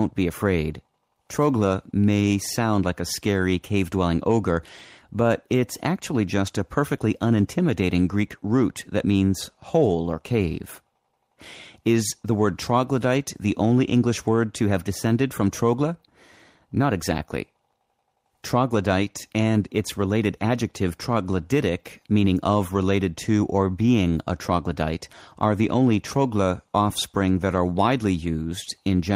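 A speech recording, with nothing technically wrong with it.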